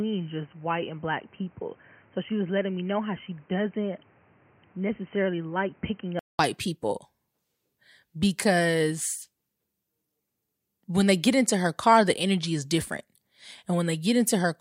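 For the first 6.39 s of this speech clip, the input was likely switched to a poorer device, such as a headset in its call profile, before returning to the main microphone. Over that stretch the sound is dull and boxy, with nothing above 3.1 kHz, a few decibels quieter, and carrying its own background hiss roughly 30 dB below the speech. At 6.39 s there is a gap of about 200 ms, after which the full, brighter sound returns.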